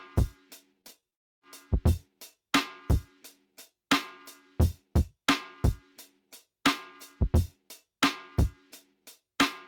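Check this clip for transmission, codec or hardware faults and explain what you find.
Two transmission faults sit back to back near the start, between about 0.81 and 1.43 s.

From 0.81 to 1.14 s there is repeated packet loss, giving a robotic sound. Four short holes, none longer than 17 ms and about 80 ms in total, are each patched by extending the preceding sound, so roughly a fifth of the stretch is synthetic. It sounds choppy, but the audio keeps returning between gaps, unlike a dropout.

From 1.14 to 1.43 s the audio breaks off for about 280 ms, almost all of it (about 270 ms) heard as silence, likely a long network dropout. The stream then resumes with that portion simply gone. A single sustained hole rather than a stutter of brief ones is what marks it apart from the packet loss just before.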